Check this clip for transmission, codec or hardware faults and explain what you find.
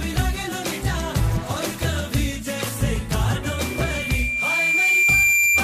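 One hardware fault is present. From 3.43 s to the end, a 2.4 kHz tone swells over about two seconds into a squeal somewhat louder than the sound: loudspeaker feedback squeal, where the microphone re-amplifies its own loudspeaker until that frequency runs away.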